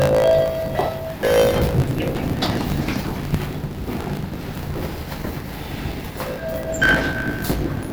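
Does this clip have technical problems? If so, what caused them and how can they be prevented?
Yes. A block size mismatch (truncated) runs throughout: each block loses its tail, leaving a 54.4 Hz buzz at the block rate and sound running 1.16 times fast at normal pitch, which fits 1024-sample writes. Prevention: match block sizes between stages or buffer the remainder.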